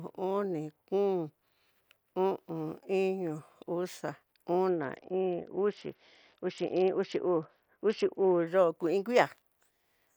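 From 4.69 s to 8.47 s the speech turns dull and muffled, losing its treble, while a gritty, grainy noise rides on it. This is a Bluetooth SBC bit pool drop: the link cut the encoder's bit allowance, which points to a fall from about 31 to 7 near 61 kbps, starving the upper sub-bands.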